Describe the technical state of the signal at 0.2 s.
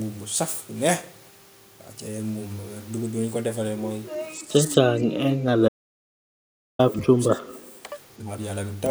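At 0.2 s the signal is intact, with no audible fault at that moment.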